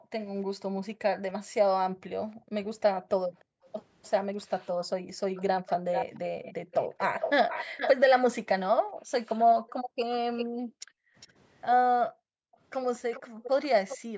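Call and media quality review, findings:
Background gated by the echo canceller: room tone dips by up to about 40 dB during far-end playback, 0.0–5.3 s, 7.65–7.77 s, 8.73–11.16 s and 12.11–14.17 s. Suppressor clamps the microphone while loudspeaker audio plays, and background returns on release.

Echo leak: delayed copy of the speech at 3.39–4.06 s (302 ms, about 40 dB down, barely audible), 5.35–8.2 s (440 ms, about 5 dB down, prominent), 10.37–12.08 s and 13.12–13.98 s (403 ms, about 10 and 15 dB down). The likely cause is residual loudspeaker pickup passing the far-end echo canceller.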